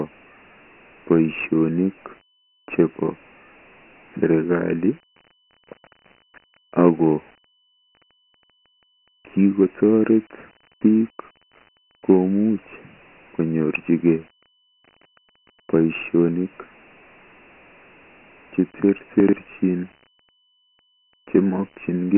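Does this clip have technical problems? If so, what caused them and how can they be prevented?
Yes. Dialogic VOX ADPCM runs throughout: heavy 4-bit ADPCM at 24 kbps, which points to 6,000 samples a second, cuts everything above 3 kHz and leaves gritty hiss riding on the speech. A spectrogram shows an empty region above 3 kHz. Storing speech as 16-bit linear PCM, or using a wideband codec, would prevent it.

Chunks out of order occur at 8.11–8.28 s, where a 42.67 ms chunk plays three chunks late, and at 19.20–19.33 s, where one plays two chunks late, causing jumbled moments. The waveform shows three abrupt discontinuities at each event. Reordering by sequence number in a jitter buffer prevents this.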